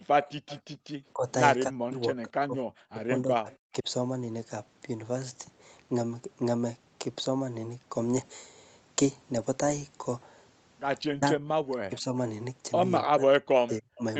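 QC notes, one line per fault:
0.08–0.17, 1.13–1.27, 1.68–3.87, 11.13–11.42, 11.86–12.16, 13.02–14.02 s, speech suppressed in double talk: the voice sinks by up to about 40 dB (about 15 dB at 1.13 s, about 25 dB at 11.86 s), most heavily across 1.68–3.87 s. The dips are likely an echo canceller clamping down while both ends talk. Unlike packet loss, the gaps have no clicks or robotic fill, and they follow the overlap.
0.22–0.60 s and 3.51–3.57 s, echo leak: a faint second copy of the voice arrives about 275 ms late, at about −20 dB in the first stretch and only a brief scrap at about −30 dB in the second. This is likely loudspeaker sound that got past the far end's echo canceller. The single, distinct delay sets it apart from room reverb, which smears continuously rather than repeating the voice as a discrete echo.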